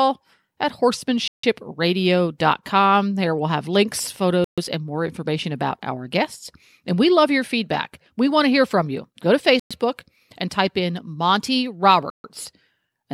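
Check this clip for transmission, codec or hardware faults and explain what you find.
The speech drops out completely four times, at 1.28, 4.44, 9.60 and 12.10 s, for about 156, 133, 111 and 140 ms. That's likely a Bluetooth stall: interference delayed packets, the headphone buffer emptied, and playback paused until retransmissions arrived, so it cuts to dead silence then resumes.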